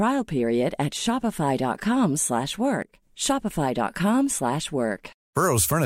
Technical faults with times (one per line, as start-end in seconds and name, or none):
2.82-3.02 one channel drops out